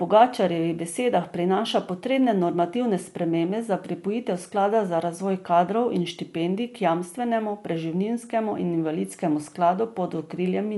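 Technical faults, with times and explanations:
Throughout: Dolby Digital compression. The speech sounds dull and band-limited, with nothing above about 11.5 kHz, and the codec damage is plainly audible as a rough, fluttering noise clinging to voiced tones. The likely cause is AC-3 style coding at a low rate, around 64 kbps: the encoder trims the top of the band and leaves many frequency lines without mantissa bits, so the decoder fills those gaps with dither noise instead of real detail.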